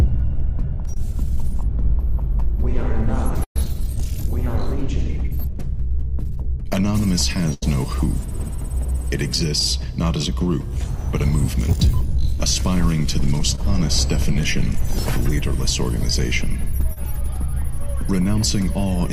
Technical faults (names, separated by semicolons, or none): short concealed packet loss; burst of packet loss; scattered short gaps